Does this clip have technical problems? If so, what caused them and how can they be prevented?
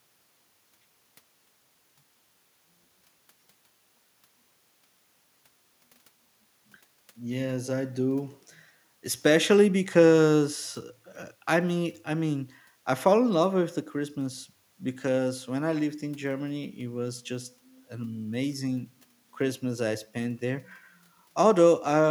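No, nothing in this speech recording stood out as a technical problem on listening, so there is nothing to trace back or guard against here.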